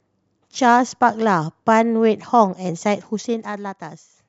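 From 3.00 to 3.77 s, zipper noise rides on the speech. The level falls by about 10 dB in 1 dB steps, roughly fifteen a second, with no smoothing between them. Each jump leaves a small click. Together they make a fast ticking buzz.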